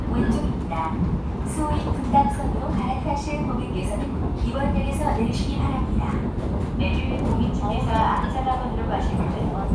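No technical faults can be heard anywhere in this recording.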